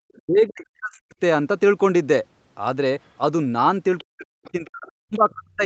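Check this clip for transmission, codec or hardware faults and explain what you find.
Two faults are audible: the talker's speech is pushed down twice, and faint fragments of a second voice slip through near the end.

Speech suppressed in double talk, 0.16 to 1.09 s and again from 4.03 s to the end: the speech drops sharply, by about 40 dB at its deepest. The likely cause is an echo canceller that mistook overlapping speech for loudspeaker echo and turned everything down.

Other side's voice leaking through, at 3.98 to 4.04 s, 4.45 to 4.69 s, 4.88 to 4.92 s and 5.14 to 5.32 s: brief scraps of another voice sit about 25 to 35 dB below the speech. This is likely loudspeaker echo left behind by incomplete echo cancellation, audible within the 8 kHz-limited call audio.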